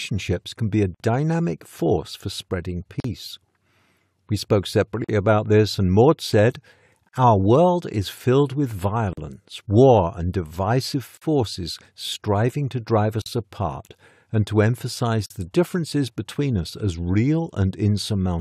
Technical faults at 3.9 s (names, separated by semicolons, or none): none